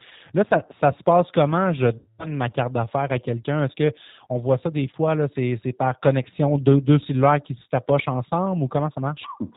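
G.729 codec damage runs through the whole speech clip: narrowband, rough and slightly synthetic, which fits an 8 kbit/s vocal-tract-and-pulse model that passes nothing above 4 kHz. VoIP packet loss concealed by the speech codec appears from 1.98 to 2.27 s, just before "ma carte d'affaires à". About 210 ms of audio goes missing, and the decoder stretches its last pitch and filter into a fading buzzy tone or coloured noise, leaving the voice weak or distorted as it recovers.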